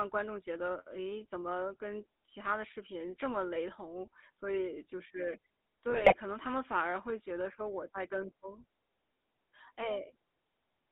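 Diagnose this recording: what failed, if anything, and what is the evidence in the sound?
GSM full-rate codec, throughout: the codec stage squeezes the speech into a band of about 250 Hz to 3.7 kHz, and its pulse-driven excitation gives a plainly buzzy, gravelly roughness consistent with 13 kbps full rate.

GSM bit errors, 5.90 to 6.15 s: on the network link, corrupted filter, pitch and gain values reach the decoder, which turns the speech into squawks and gargling across roughly a dozen frames.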